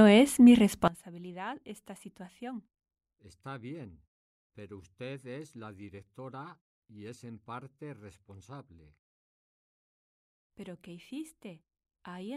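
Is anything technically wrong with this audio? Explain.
Yes. From 0.88 s, just after "es mi", to the end, the speech drops by about 20 dB to a faint copy. The likely cause is one channel inverted: one stereo side has reversed polarity, so the centred voice cancels when the two are summed to mono. Only their faint difference survives. The silences in the pauses come from muted pauses, which is a separate and intended behaviour.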